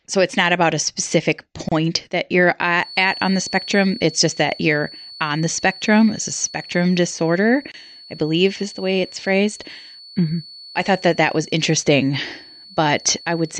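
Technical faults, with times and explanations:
1.69–1.72 s and 7.72–7.74 s, gap at a join of encoded pieces: silences of about 30 ms and 24 ms open in continuous speech, the first between "not about a specific" and "that you're". They fall exactly 6 s apart, which points to separately encoded pieces joined without trimming the encoder's start-up delay and last-frame padding. The speech resumes where it stopped rather than skipping ahead, and the fixed spacing distinguishes this from random dropouts.
2.74–13.59 s, feedback whistle: just after "that you're", a thin, steady tone at 4.4 kHz begins and runs to the end, roughly 20 dB below the speech and swelling and fading slowly in level. Its likely cause is a loudspeaker-to-microphone loop held right at the edge of feedback. The tone stays at one pitch and never builds into a howl, and that single high frequency distinguishes it from broadband hiss or low mains hum.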